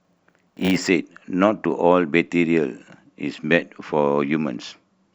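From the start to 0.87 s, the speech carries a block size mismatch (padded): one processing stage hands over blocks shorter than the next stage expects, and each block's remainder is filled with silence. That repeated short gap produces a buzz at 100 Hz, the block rate, laid over the speech. Because zeros are inserted rather than audio resampled, the speech runs slower, at about 0.92 times normal speed, while its timbre stays.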